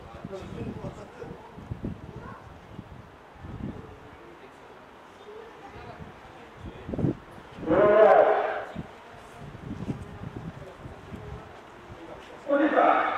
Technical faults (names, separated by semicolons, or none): none